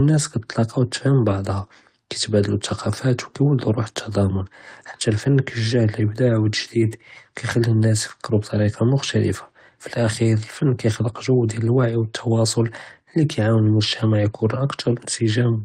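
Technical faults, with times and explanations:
1.55, 2.79–2.85, 5.99, 7.49, 10.65–10.67 and 13.65–13.67 s, lost packet rebuilt from error correction: each time the speech briefly turns rough and grainy for about 20 ms (40 ms at 2.79 s, consistent with two consecutive lost packets), then returns to full quality. The stream kept going because each missing stretch was replaced by a coarse low-bitrate copy carried in the next packet. Unlike packet-loss concealment or a dropout, there is no silence, smearing or repeated tail, only a short rough patch.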